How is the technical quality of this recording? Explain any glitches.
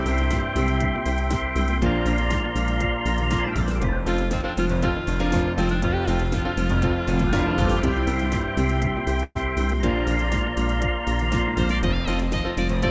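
The recording has one audible glitch, a burst of packet loss, and the audio carries no content above 8 kHz, consistent with a wideband call codec such as G.722.

From 9.23 to 9.37 s, about 120 ms of audio failed to arrive in time for playback. The receiver covered the gap by extending the last received sound while steadily lowering its level, so there is no silence: the sound briefly smears into a held, fading tone or hiss. Playback then resumes at a later point, and the roughly 120 ms in between is missing.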